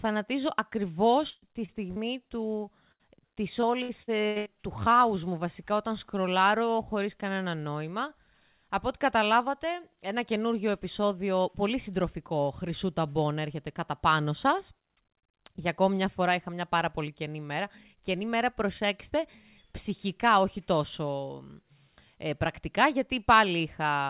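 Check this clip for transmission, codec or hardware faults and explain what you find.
The clip has three kinds of network fault, all packet loss on a call path. The audio stops at 4 kHz throughout, which fits a 64 kbps G.711 mu-law codec.

Burst of packet loss, 1.30 to 1.44 s and 2.92 to 3.01 s: several consecutive packets failed to arrive in time. The receiver extended the last sound for about 116 ms in the first gap, then fell silent for about 20 ms, and for about 75 ms in the second. Each gap sounds like a fading hold, with roughly 120 ms and 80 ms of speech lost before the audio resumes further on.

Short concealed packet loss, 1.66 to 1.70 s and 1.92 to 1.98 s: single brief dropouts of about 20 ms and 40 ms reached the decoder too late. It bridged each hole by continuing the preceding sound and blending back into real audio. Each gap can be heard as a quick smear or wobble rather than a clear break, coming just after the first burst.

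Repeated packet loss (robotic sound), 3.61 to 4.48 s: packets went missing five times in under a second, with the longest hole about 80 ms. About a third of this stretch is concealment, roughly 280 ms in total. Because each patch barely ends before the next gap begins, the speech turns choppy, with pieces missing between the repaired fragments.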